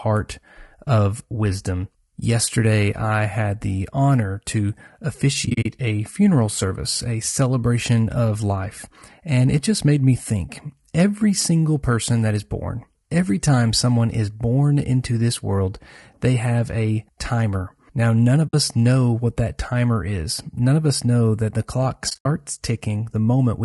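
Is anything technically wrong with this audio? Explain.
Yes. Throughout, the speech sounds rough and grainy, likely from low-delay AAC compression at a low bitrate near 32 kbps; a spectrogram shows noise filling between harmonics and a thin top band.

AAC frame loss with muting: at 5.45 to 5.66 s, 18.47 to 18.54 s and 22.09 to 22.26 s, lost frames decode as silence, leaving soft-faded gaps, seen as tapered waveform dropouts.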